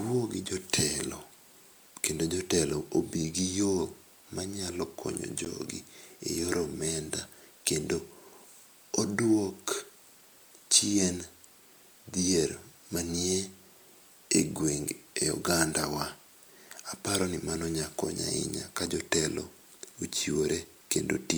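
A gap at a join of encoded pieces sits at 5.45 s: two separately encoded segments were butted together untrimmed, leaving a roughly 13 ms gap that breaks the speech before it resumes.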